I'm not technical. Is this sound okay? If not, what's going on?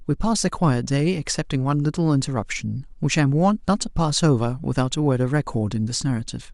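Yes, nothing wrong can be heard in this speech recording, so there's nothing to fix.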